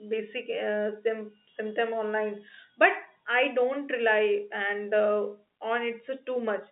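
Nothing goes wrong anywhere in this speech, which simply sounds like a normal G.711 mu-law phone line at 64 kbps, carrying the band from 200 Hz to 3.7 kHz with nothing above 3.8 kHz, as that telephone coding is meant to.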